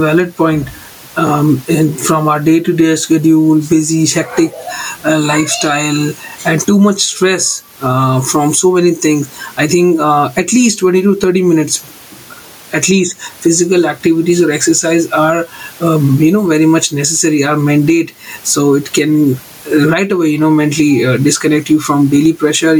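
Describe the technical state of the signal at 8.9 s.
At 8.9 s the speech shows gain pumping, present throughout the clip, with a gain swing of roughly 15 dB. The likely cause is input gain set far too high, with a fast limiter or compressor clamping each peak. The room noise is normally about 39 dB below the speech, and the dynamics sound squashed.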